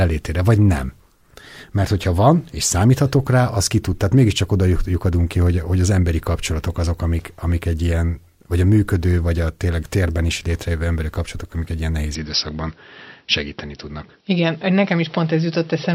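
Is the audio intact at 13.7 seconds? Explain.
No, from 12.15 s, right after "amik egy ilyen nehéz", the speech likely switches to a poorer input device, dull and boxy with nothing above 5.7 kHz, continuing to the end.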